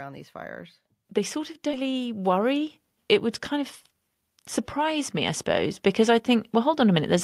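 Speech with two kinds of fault. Automatic gain rising appears from 0.05 to 2.76 s and again from 4.73 to 7.19 s. In both stretches the gain control treated the input as too quiet and raised its gain gradually, by about 6 dB and then about 5 dB, so the voice and the background swell together. Jitter buffer speed-up occurs from 2.29 to 2.62 s at 110% speed, and from 3.87 to 4.58 s at 113%, just after "would kind of". The receiver was holding excess audio and trimmed short pitch-period pieces in succession, about 40 ms and then around a tenth of a second in total. The speech sounds hurried while its pitch stays the same.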